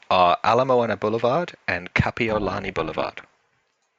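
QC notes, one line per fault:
2.29–3.52 s overlap-add ripple: the speech level swings by about 11 dB around 300 times a second, once per frame, because the windowed frames were rejoined with an overlap whose windows do not sum to a steady gain. At that speed the swing fuses into a buzzy, robotic roughness, not a slow pulsing tremolo. Unlike comb filtering, which carves fixed notches into the spectrum, this is a level modulation in time, locked to the frame rate.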